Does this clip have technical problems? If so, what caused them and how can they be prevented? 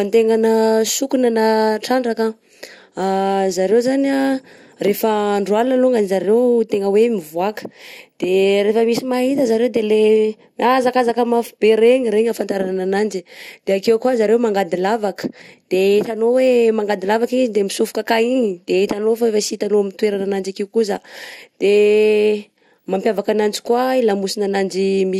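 Yes. Throughout the speech the sound is dull and muffled, with a gurgling, grainy distortion and upper frequencies that seem to flicker in and out. This is likely MP2 compression at a low bitrate, consistent with roughly 80 kbps. Layer II divides the signal into 32 sub-bands and shares a limited bit budget among them, so upper bands get switched off intermittently and the remaining ones are coarsely quantised. Encoding at a higher bitrate or with a more efficient codec would prevent it.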